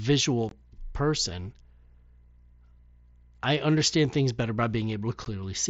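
Unconcealed Bluetooth headset packet loss twice drops voice packets between headset and phone, and the gaps are filled with silence or an idle pattern rather than patched over. From 0.49 to 0.52 s a hole of about 23 ms opens, consistent with three consecutive packets going missing; at 5.25 s a shorter 15 ms hole suggests two. Each cuts the speech with abrupt edges, producing a brief dropout against the light graininess of the mSBC wideband link.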